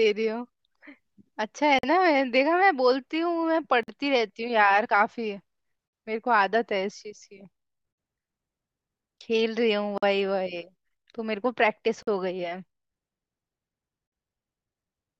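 At 1.79, 3.83, 5.88, 7.93, 9.98, 12.03 and 14.07 s the speech drops out for 46 ms the first time and 48 ms thereafter. This is a gap at a join of encoded pieces: the audio was encoded in 2-second pieces and joined untrimmed, so each piece's leading encoder delay and padded final frame remain as silence. Each gap has smeared edges, and the speech resumes from where it stopped.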